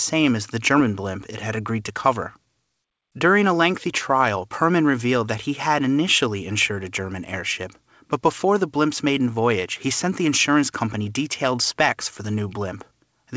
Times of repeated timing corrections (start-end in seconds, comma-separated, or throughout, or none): 0.14-13.13